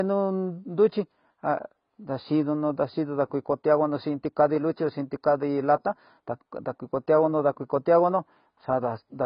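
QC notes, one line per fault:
Throughout, AAC compression: the speech was likely encoded as AAC-LC at a rate that fits roughly 16 kbps. The coder drops everything above 5.1 kHz and quantises the rest coarsely, so the speech sounds heavily dull, smeared and warbly.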